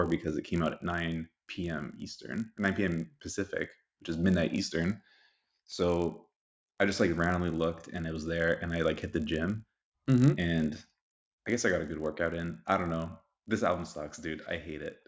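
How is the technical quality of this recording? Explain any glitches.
A steady buzz runs under the speech for the whole recording, following the voice and dropping away in pauses. It is a resampler restarted on every block: converting from 48 kHz to 16 kHz in 20 ms blocks leaves a small error at each edge, giving ticks at 50 Hz.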